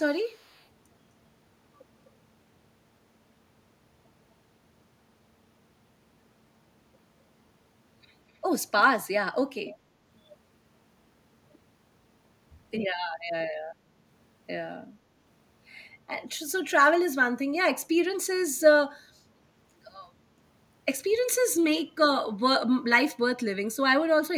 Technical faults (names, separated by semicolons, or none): echo leak